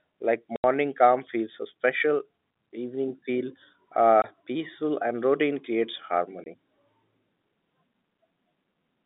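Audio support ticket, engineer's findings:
Packet loss filled with silence at 0.56 s (80 ms gap), 4.22 s and 6.44 s (20 ms each) on the G.711 telephone-band line. Lost packets replaced by silence leave hard-edged holes. Gap lengths fit 20 ms packets, and the first suggests a burst of consecutive losses.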